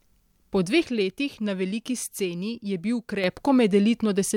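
Speech, with one channel dropping out from 0.84 to 3.24 s: the level falls abruptly by about 6 dB and recovers just as suddenly. That step is what a mono sum produces when one stereo leg likely goes silent, halving the shared signal.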